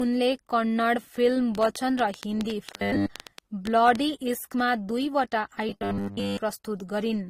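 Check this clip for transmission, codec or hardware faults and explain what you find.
Three kinds of fault are audible in this speech.

Transcoding between lossy codecs runs throughout. The sound was likely encoded at a low rate, something like Opus around 24 kbit/s, then re-encoded as AAC-LC. The second codec carries the first codec's smearing plus its own, and nothing survives above 16.5 kHz.

A train of clicks runs from 1.55 to 3.96 s: roughly twenty similar pops at about 8.3 per second, unevenly spaced, peaking about 15 dB above the speech. The likely cause is interference or a struggling interface injecting pulses, heard as ticking over the sound.

Robotic sound from repeated short buffers occurs at 2.76–3.09 s and 5.69–6.39 s. Audio likely arrived too seldom, so a roughly 10 ms chunk was replayed in place of most of the real signal, imposing a rigid 100 Hz metallic buzz that loosely tracks the speech.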